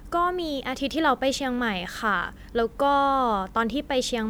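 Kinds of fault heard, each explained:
None can be heard in this speech recording. There is nothing to list under any kind.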